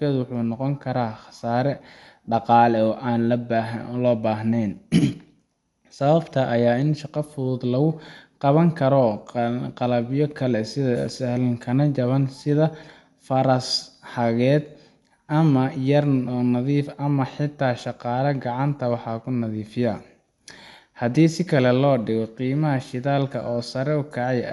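From start to finish the speech sounds dull and coarse, with nothing above 11.4 kHz and a rough, fluttering noise clinging to voiced sounds. This is likely Dolby Digital compression at a low bitrate, consistent with roughly 64 kbps: the encoder narrows the band and leaves many frequency lines without mantissa bits, so the decoder fills them with dither noise. That grainy hiss distinguishes it from a plain low-pass filter, which dulls the sound but adds nothing.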